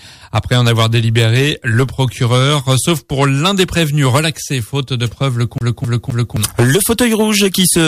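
From 5.58 to 6.37 s the audio falls into a CD stuck on one turn: a 0.26 s slice plays three times in a row, with a brief mute at each jump. That even stutter is the laser being thrown back one track by a scratch at the same point on every revolution.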